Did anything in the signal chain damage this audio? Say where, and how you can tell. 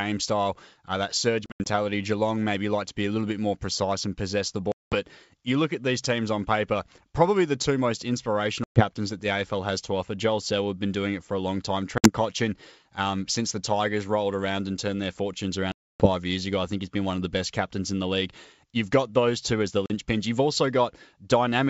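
Yes, at the network stage. The audio drops into hard-edged silence at 1.46–1.67 s, 4.72–4.96 s, 8.64–8.84 s, 11.98–12.10 s, 15.72–16.08 s (the longest, 280 ms lost) and 19.86–19.92 s. Each time it resumes slightly distorted and settles within tens of milliseconds. That is packet loss on an ADPCM call: silence-filled gaps desynchronise the decoder's predictor and step size from the sender's. The G.722 wideband coding itself sounds clean.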